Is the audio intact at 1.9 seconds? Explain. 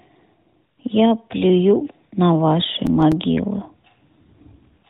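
No. From 1.84 to 2.06 s the sound is hit by AMR bit errors. The length fits about a dozen corrupted 20 ms frames. A few percent of the weakly protected bits arrived flipped, while the checksum on the key bits still passed. The excitation pulses land in the wrong places, and fine pitch, gain and spectral values drift. Pitch and level roughly hold, but the narrowband sound turns hoarse, scratchy and gargly.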